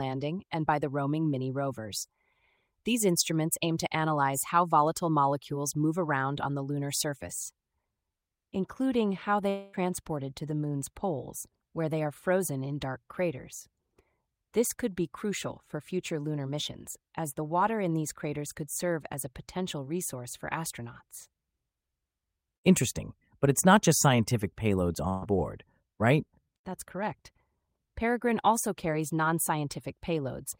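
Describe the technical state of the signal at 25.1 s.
At 25.1 s there is a burst of packet loss from 25.09 to 25.25 s: about 125 ms is concealed by extending and fading the last sound, and 120 ms of speech is skipped.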